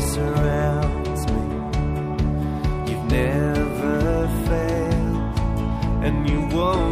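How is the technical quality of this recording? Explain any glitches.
No glitches can be heard anywhere in this recording. There is nothing technical here that needs explaining.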